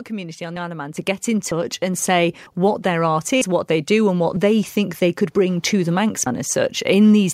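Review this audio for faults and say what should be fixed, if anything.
Audio missing between chunks occurs at 0.56, 1.51, 3.41 and 6.26 s. At each point a brief slice of speech, around 50 ms, vanishes and the two sides butt together with no silence, so the sound skips forward. Unlike a network dropout, nothing is filled with silence or a smeared concealment, and the skips recur at regular intervals. That likely points to a recorder handling audio in 1-second chunks and losing samples at each handover. Prevent it by using a capture pipeline that writes chunks continuously, with overlap or a ring buffer between them.

Microphone volume stepped up happens twice: about 7 dB at 0.97 s, then about 2 dB more at 1.94 s. Each time the speech and the background noise jump together, instantly, and stay at the new level. That distinguishes it from a compressor or automatic gain control riding the level, which would ramp gradually and pump with the speech rather than switching once and holding. 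Prevent it by setting a sensible input level beforehand and disabling the call software's automatic microphone volume adjustment.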